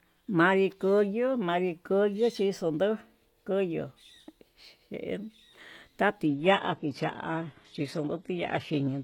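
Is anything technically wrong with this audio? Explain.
Yes. From 6.26 s to the end, the speech drops to an adaptive stream at a lower bitrate. The stream switched mid-playback to a much leaner encoding, which suggests a change from roughly 96 kbit/s AAC to a low-rate HE-AAC version. From that point nothing above 12.3 kHz survives, and the upper treble sounds thin, with added codec grit. On a spectrogram the high band turns smeared and patchy at 6.26 s and is capped at 12.3 kHz, while the waveform runs on without any gap.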